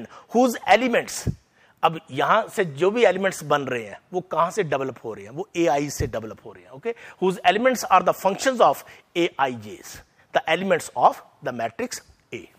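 Nothing here sounds technically wrong at any point in the audio, so there's no fault to point to and no cause to chase down.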